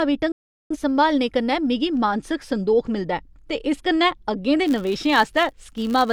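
A speech recording with two technical faults. From 0.32 s to 0.77 s there is a digital broadcast dropout: the audio fades out in about 3 ms, stays muted, and resumes just before "संभालने कन्नै मिगी मानसिक". The receiver muted while frames were corrupted or missing, so the gap's length fits several consecutive lost frames, and that material is gone. From 4.67 s to the end, a filter restarted on every block adds a 100 Hz buzz. Because the filter starts each block from zero state, every block opens with a small transient, and these repeat as a buzz whose loudness tracks the speech level.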